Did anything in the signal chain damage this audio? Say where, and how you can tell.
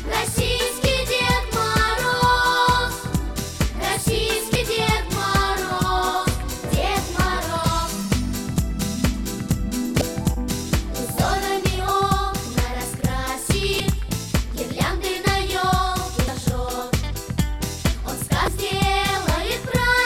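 Yes. Damaged data in a compressed stream shows up at the codec decode stage as brief 34 ms glitches at 4.52, 9.98, 13.77, 16.25 and 18.45 s. Corrupted bytes make the decoder misread those frames, lose sync and hunt for the next valid frame header.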